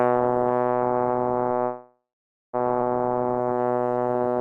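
A short music excerpt carried over a call link, with three transport faults. From 1.63 to 2.55 s there is a call audio freeze. The last sound is stretched into a decaying buzz that falls to silence for about half a second before the music resumes exactly where it stopped. Nothing is lost, but roughly 0.9 s of filler has been inserted, most likely because packets stalled in transit and the jitter buffer drained completely, adding 900 ms of delay. At 2.81 to 2.84 s the playback does a skip ahead. Around 0.7 s of music vanishes, and the two sides are spliced with only a 5 ms join, so the passage lurches forward with no audible gap. This is audio dropped in transit or by an overflowing jitter buffer, trimming roughly 700 ms of delay in one step. From 3.08 s to the end a jitter buffer slow-down sets in. Pitch stays put while the music runs at about 86% speed, as the receiver repeats single pitch periods over and over to rebuild its reserve, adding 187 ms in total. 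Sustained sounds are drawn out. Throughout, the band is limited to 12 kHz with the usual coding noise, consistent with Opus at a modest call bitrate.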